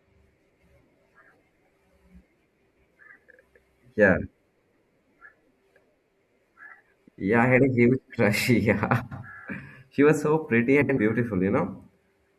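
Frames out of order garble the speech at 0.39–0.60 s, 2.67–2.88 s, 4.52–4.73 s, 6.98–7.19 s, 9.01–9.23 s, and 10.81–10.98 s just after "was so pretty". In each of the first five, two adjacent blocks of about 105 ms were swapped, which fits runs of four frames. The last pair is about 78 ms each, fitting three frames. The result is a brief flutter. Unlike a dropout or repeat, nothing is missing or doubled, and timing stays intact.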